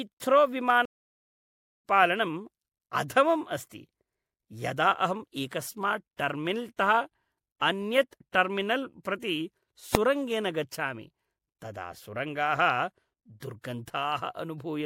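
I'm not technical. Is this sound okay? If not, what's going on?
No. At 0.85 s the speech cuts out for about a second, then resumes at 1.84 s roughly a second further on. That's a stream reconnect. At 9.95 s there's one sharp bang: invalid numbers at full scale, where a calculation error pushed the output to maximum for an instant.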